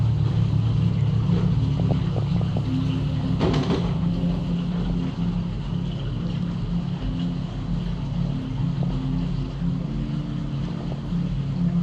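DAB burbling appears five times: from 1.77 to 2.59 s, at 4.90 s, from 7.00 to 7.03 s, from 8.83 to 8.91 s, and from 10.68 to 10.98 s. Weak reception let bit errors, around a few tenths of a percent, slip past error correction into the MP2 data. Corrupted samples put short blips of noise into single sub-bands, and corrupted scale factors make individual sub-bands leap in level for up to a frame, producing a burbling over the audio, longest in the first burst.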